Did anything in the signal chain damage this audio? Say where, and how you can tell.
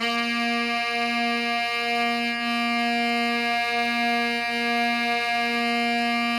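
Yes. Mains buzz runs through the whole clip: a steady, raspy buzz sitting roughly 30 dB below the sound, built on 50 Hz harmonics reaching into the kilohertz range. This points to the analogue wiring, where a dimmer, rectifier or poor shielding couples sharp switching spikes in twice per mains cycle.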